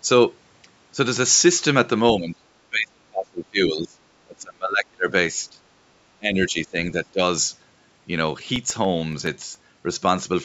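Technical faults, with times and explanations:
2.17–2.48, 2.70–3.99, 4.24–5.08, 5.50–5.60, 6.19–6.77 and 6.93–7.21 s: speech suppressed in double talk. The speech dips by up to roughly 30 dB, likely because an echo canceller ducked it while the far end talked.
8.42–9.55 s: CD scratch ticks. Nine very short ticks, each a few milliseconds, come at a steady rate of about eight a second, one per disc revolution, unlike random digital clicks.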